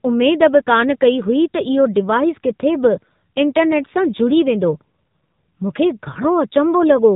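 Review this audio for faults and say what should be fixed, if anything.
Throughout, the speech carries AMR narrowband mobile codec damage: a buzzy, synthetic voice that fits a low mode near 7.4 kbps, with nothing above 4 kHz. A spectrogram shows a flat ceiling at 4 kHz. Record or transmit over a wideband path instead.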